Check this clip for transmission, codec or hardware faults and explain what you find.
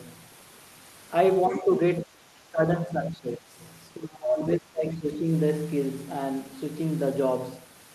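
The speech repeatedly sinks in four stretches: 1.48 to 1.81 s, 2.04 to 2.62 s, 2.85 to 3.58 s, and 3.95 to 5.27 s. The first dip is slight, the middle two are deeper, and the last is the longest and deepest, roughly 20 dB down. This is likely speech suppressed in double talk: with both ends talking, the echo canceller could not separate the near talker from the loudspeaker echo and turned both down.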